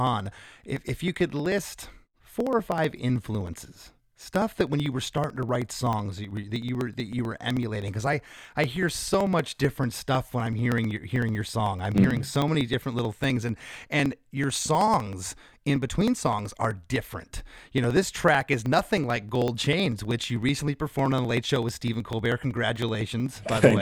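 From 0.07 s to 23.77 s the speech is broken by periodic USB or driver dropouts every 0.063 s, roughly sixteen a second. Each time about a millisecond of audio is skipped outright, so the join produces a steady ticking that is audible only under the voice.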